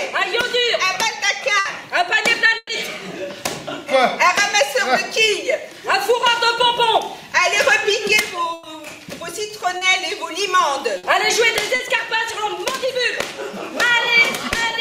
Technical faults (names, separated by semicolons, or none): burst of packet loss; short concealed packet loss